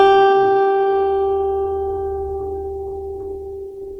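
All the way through, this music has that grainy, rough texture where tones turn noisy rather than swirly, which is likely Opus compression in its music mode at a low rate, around 16 kbps. Bands get filled with noise, though the bandwidth still reaches about 20.1 kHz.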